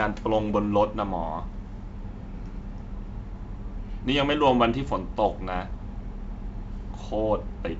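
No technical faults can be heard in the speech, which carries the wideband telephone character of G.722 coding at 64 kbit/s, with nothing above 7.7 kHz and the coding itself leaving at most faint traces.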